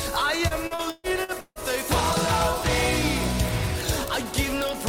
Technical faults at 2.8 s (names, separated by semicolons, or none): word clock ticks